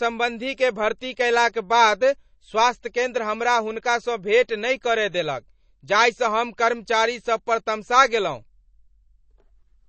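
Throughout, the speech sounds watery and swirly with nothing above 8.3 kHz, likely from low-bitrate MP3 compression around 32 kbps; the shimmering dropouts distinguish it from a simple low-pass filter.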